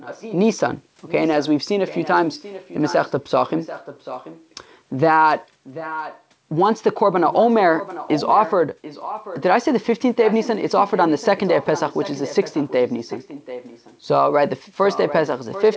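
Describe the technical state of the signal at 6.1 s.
At 6.1 s an echo leak is under way, running from 5.64 to 6.23 s. The likely cause is a far-end echo canceller that failed to fully remove what its microphone caught from a loudspeaker, so that sound was sent back into the call. The result is a delayed copy of the speech, trailing the original by about 0.74 s and sitting roughly 10 dB below it, band-limited to 8 kHz like the rest of the call audio.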